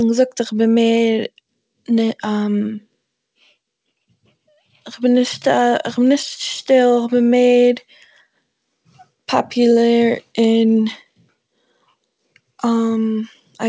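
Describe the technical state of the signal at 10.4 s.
At 10.4 s the speech comes through intact, with only the band limit of the G.722 call path, which leaves nothing above 8 kHz.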